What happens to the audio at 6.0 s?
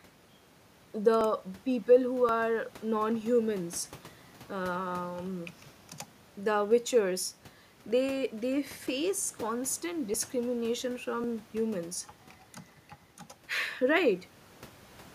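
Nothing goes wrong at 6.0 s; the speech there plays through intact, with no dropout, click or distortion.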